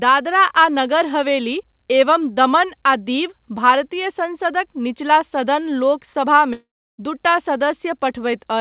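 A long network dropout runs from 6.53 to 7.01 s in this speech recording. About 450 ms of audio never arrives. The receiver stretches the last sound into a fading buzz, then leaves 330 ms of near-silence before speech resumes with that stretch missing, likely from packets lost in transit. Throughout, nothing sounds above 4 kHz, which points to a narrowband call codec such as G.711 A-law at 64 kbps.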